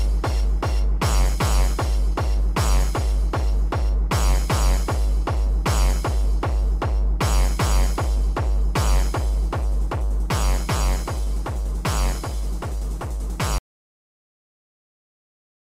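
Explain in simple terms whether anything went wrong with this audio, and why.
At 13.58 s the sound stops dead and stays silent to the end: an audio dropout to silence, likely from the input connection being lost.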